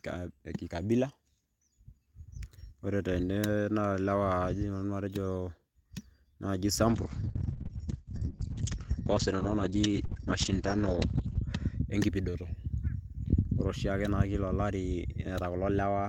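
Speech with a call bitrate drop from 6.88 to 11.93 s. The audio turns muffled and rough as the top end narrows from 20 kHz to 8 kHz, which fits the encoder falling from 32 to 9 kbps. Unlike packet loss, it degrades steadily without gaps or clicks.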